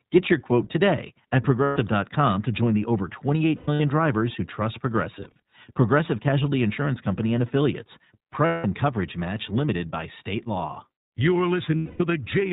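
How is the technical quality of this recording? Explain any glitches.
The technical quality is limited: this is speech carried through the iLBC codec for its whole length, with five bursts of lost frames on top.

iLBC codec: The band stops at 4 kHz, so the speech sounds boxed-in and telephone-like, and a plainly audible roughness, slightly synthetic and buzzy, sits on every syllable. That comes from the codec rebuilding each 20 ms frame's excitation at a low rate, which fits its 15.2 kbps mode. Unlike a plain low-pass filter, this adds grit and artificial texture, not just lost brightness.

Lost iLBC frames: At 1.64–1.78 s, 3.56–3.82 s (just before "drivers who trust"), 5.20–5.40 s (just after "drivers who trust"), 8.46–8.66 s (just before "coverage match limited by") and 11.76–12.02 s, packets went missing. The decoder filled the holes by repeating the last pitch cycle blended with noise. 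Each gap therefore sounds like a held, buzzy or breathy vowel instead of silence or a click. The losses total about 120 ms, 180 ms, 100 ms, 180 ms and 240 ms. The second and third are scattered: the second spans about a quarter second with its longest run near a tenth of a second, and the third is a string of single-frame blips. Because each iLBC frame decodes independently, the speech snaps back cleanly right after each gap. A codec that depends on earlier frames would instead smear for a while after the loss.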